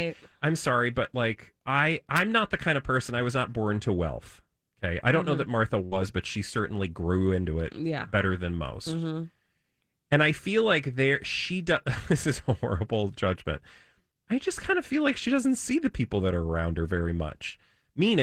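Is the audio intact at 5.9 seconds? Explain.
No, there's a burst of packet loss from about 5.85 to 5.94 s, just before "but she certainly grew". The receiver filled roughly 60 ms by stretching the last sound and fading it out, then jumped ahead, so about 60 ms of speech is simply gone.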